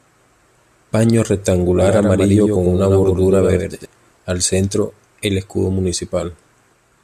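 From 1.82 s to 3.86 s, just before "al centro el escudo", a doubled audio track appears: a second full-band copy of the speech trails about 100 ms behind, roughly 5 dB quieter, with no room colour, starting and stopping abruptly, likely from a second, slower capture path.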